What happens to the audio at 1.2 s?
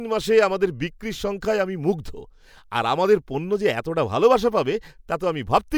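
Nothing goes wrong at 1.2 s; the speech there plays through intact, with no audible fault.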